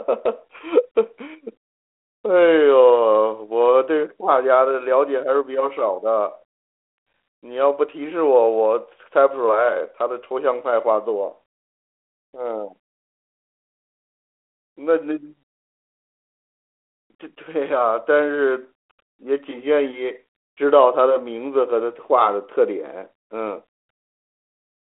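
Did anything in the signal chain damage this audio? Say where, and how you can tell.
No, nothing in the chain damaged this speech: it is band-limited to the 300 Hz to 3.4 kHz telephone line, with nothing above 3.8 kHz, and carries the light, level-following grain of 32 kbit/s G.726 ADPCM, which is how that codec behaves at its normal DECT rate.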